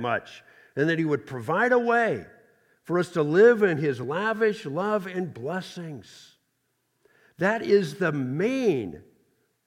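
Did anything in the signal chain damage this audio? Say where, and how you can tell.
Yes, there's one spot, at about 4.04 s in the speech, where the sound jumps forward with no gap of silence. That points to a dropped buffer (overrun) at the driver or buffer stage, most likely the capture side not collecting samples before the hardware overwrote them. Roughly 10 ms of audio goes missing, and the two sides are butted straight together.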